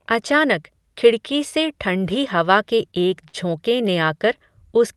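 From 2.91 to 3.90 s, right after "से ठण्ढी हवा के", repeated stalls (stutter) set in. The jitter buffer ran dry seven times, and the receiver stretched the last sound across about 107 ms, the longest hold 52 ms. Unlike packet-loss dropouts, nothing goes missing. The speech just drags and hiccups.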